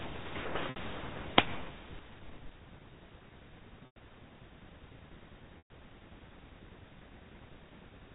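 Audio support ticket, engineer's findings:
Packet loss with pitch repetition at 0.70 s (60 ms), 3.86 s (100 ms) and 5.58 s (120 ms). The receiver's concealment loops the last pitch period, so each gap is a short held buzz. The two longer gaps fade toward silence before speech cross-fades back. Gap lengths fit 20 ms packets. G.711 telephone coding is carried underneath, band-limited to 4 kHz.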